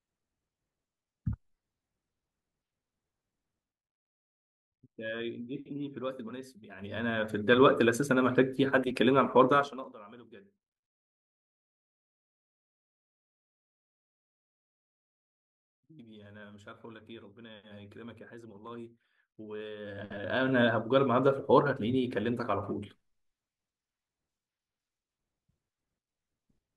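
Zipper noise occurs at 6.72–7.56 s, 9.56–9.92 s and 19.8–20.64 s, where the speech level rises, falls and rises by about 15, 25 and 25 dB in unsmoothed 1, 3 and 1 dB steps, roughly thirty a second. Each step clicks, so these gain moves tick and buzz.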